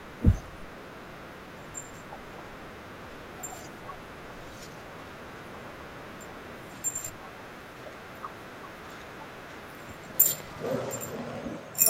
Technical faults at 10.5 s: train of clicks

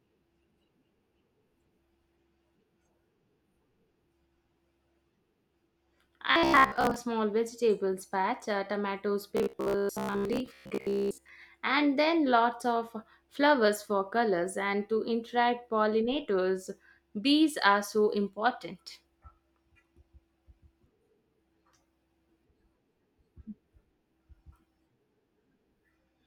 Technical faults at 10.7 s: robotic sound from repeated short buffers

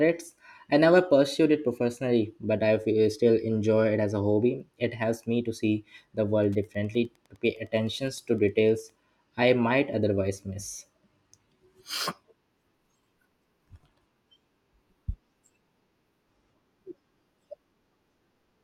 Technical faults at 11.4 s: none

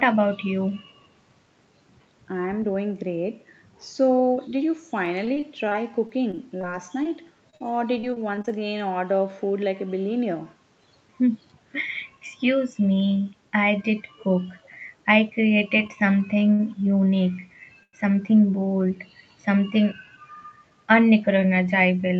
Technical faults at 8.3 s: repeated packet loss (robotic sound)

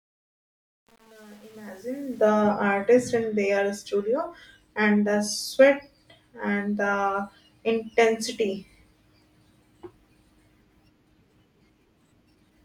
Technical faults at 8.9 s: none

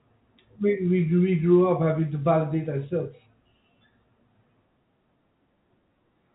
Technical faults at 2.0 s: none

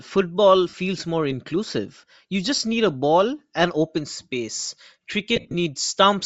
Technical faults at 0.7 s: Bluetooth LC3 compression; lost LE Audio frames

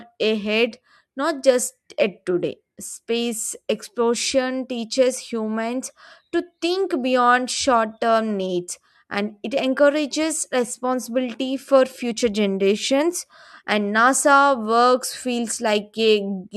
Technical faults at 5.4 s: none

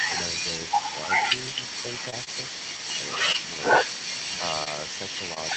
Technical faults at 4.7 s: short concealed packet loss

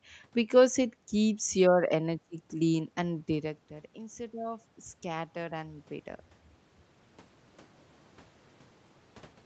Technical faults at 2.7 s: automatic gain rising

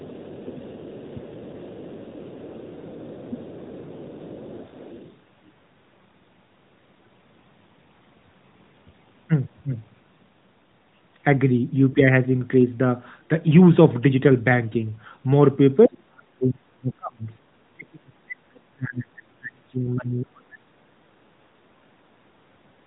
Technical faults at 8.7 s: none

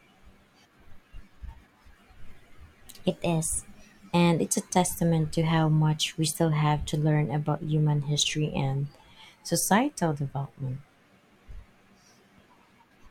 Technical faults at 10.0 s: drift correction step

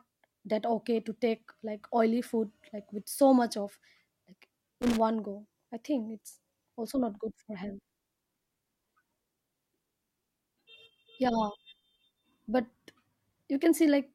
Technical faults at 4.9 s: loose connector crackle

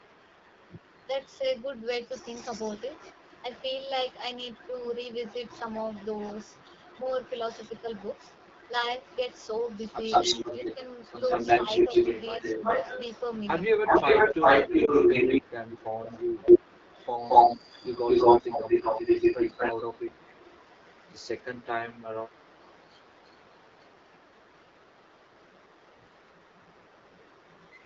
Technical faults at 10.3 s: AMR wideband (HD Voice) codec; echo leak; speech suppressed in double talk

